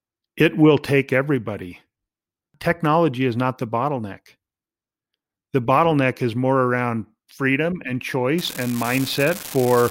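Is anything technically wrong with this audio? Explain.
Yes. From about 8.36 s, right after "more around freedom and", an unreliable data bit kicks in and runs to the end of the clip. One line in the digital path looks marginal, so that bit flips in a random share of samples, and every flip throws a spike of the same fixed size, about -11 dBFS. You hear it as a steady crackly fizz sitting on top of the speech, and it keeps going through the gaps between phrases.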